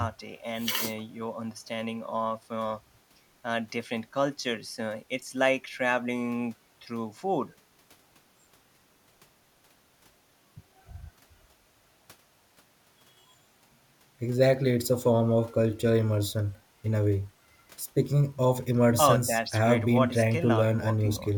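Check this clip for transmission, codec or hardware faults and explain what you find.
No transmission, codec or hardware faults can be heard anywhere in the speech recording, which stays continuous and stable throughout.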